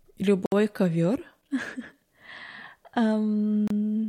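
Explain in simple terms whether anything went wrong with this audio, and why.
The speech briefly cuts to silence twice, at 0.46–0.52 s and 3.68–3.70 s. This is a Bluetooth stall, likely from radio interference emptying the headphones' buffer. It is a clean silent gap, not a click or crackle.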